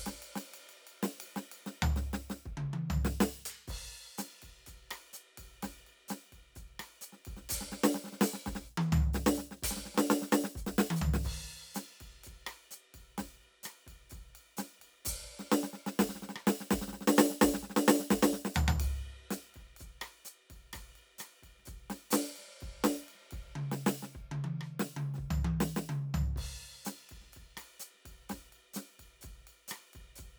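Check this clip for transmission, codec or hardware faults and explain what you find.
Nothing here sounds like a transmission, codec or hardware problem; the music just runs along without a hitch.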